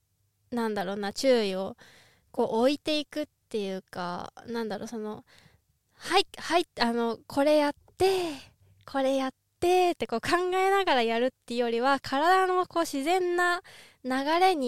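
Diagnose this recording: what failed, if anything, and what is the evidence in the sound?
Nothing failed; no fault can be heard in this speech.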